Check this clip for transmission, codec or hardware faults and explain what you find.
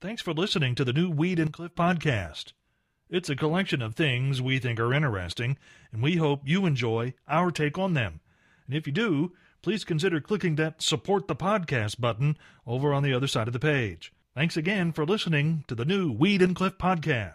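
Two faults stand out in this speech, both sudden gain jumps. From 1.47 to 1.75 s the level drops about 11 dB. From 16.21 to 16.47 s, after "listening to the new", it rises about 5 dB. Each step is likely an unramped digital gain change. Unlike a fade or dropout, speech and background noise shift together instantly.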